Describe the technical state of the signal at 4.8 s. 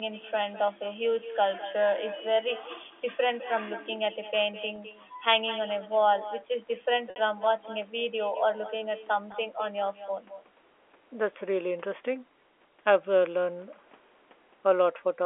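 A single 20 ms packet went missing from 4.76 to 4.78 s, and the receiver filled the gap by repeating the last pitch period: packet loss with pitch repetition, heard as a brief, slightly held buzzy tone. Throughout this stretch there is also echo with no canceller: the far end's loudspeaker feeds its microphone, so the sound returns about a fifth of a second later as a thinner copy about 15 dB down.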